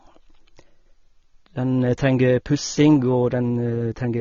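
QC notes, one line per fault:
Throughout, AAC compression: the speech is dull and smeared, with nothing above 6.9 kHz and a fizzy, warbly edge on sibilants. It's likely a low-bitrate AAC-LC encode, fitting roughly 24 kbps, which cuts the top bands and quantises the rest coarsely.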